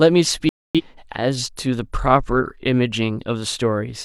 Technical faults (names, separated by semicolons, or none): digital broadcast dropout